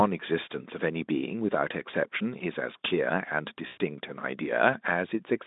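A speech recording carried over a narrowband Speex call line. From 3.67 to 3.78 s the sound smears into a fading buzzy tone or coloured noise: VoIP packet loss concealed by the speech codec, about 100 ms of missing audio, which fits five lost frames.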